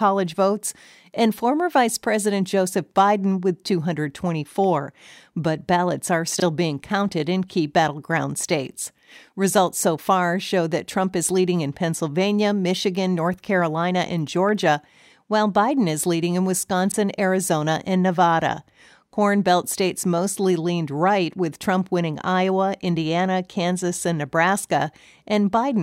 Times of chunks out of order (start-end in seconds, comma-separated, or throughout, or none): 6.38-6.42, 16.90-16.94